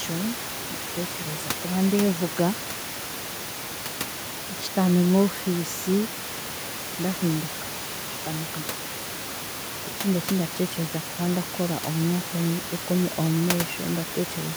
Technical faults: none

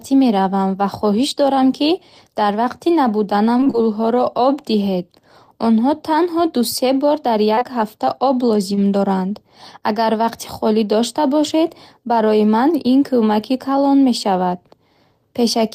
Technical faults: repeated packet loss (robotic sound); short concealed packet loss

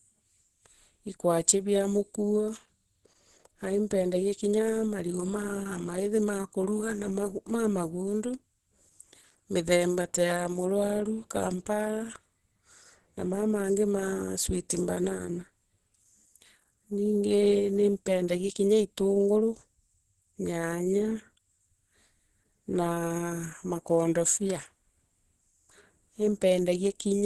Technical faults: Opus compression

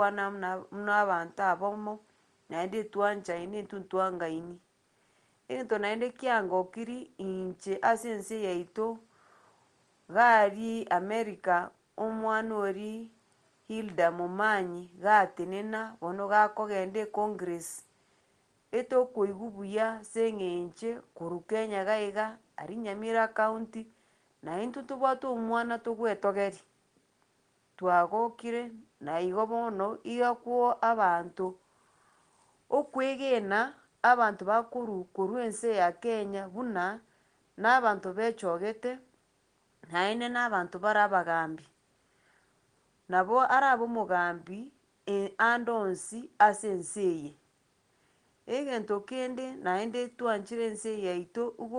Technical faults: none

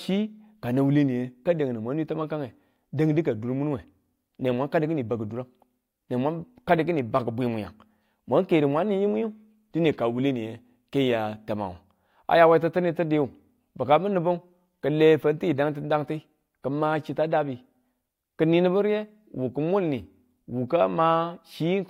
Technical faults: none

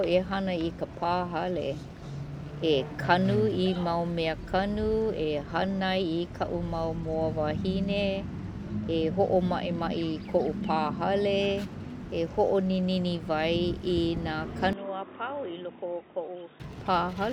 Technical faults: input switched to a poorer device

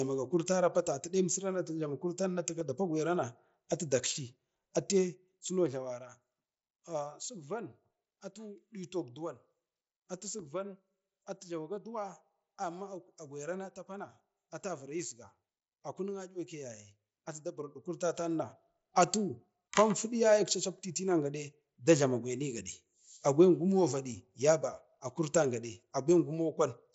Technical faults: concealed Bluetooth headset packet loss; zipper noise

